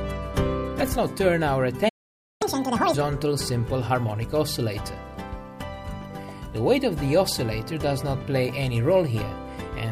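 At 1.88 s the sound halts mid-flow and stays silent for about 518 ms, until 2.42 s. This playback stall likely comes from the player's buffer running dry or its thread being blocked.

From 2.42 to 2.94 s the player is catching up at higher speed, running at twice normal rate to recover the lost time. Pitch climbs by roughly ten semitones along with the tempo, which sets it apart from a simple pitch shift, before both settle back to normal.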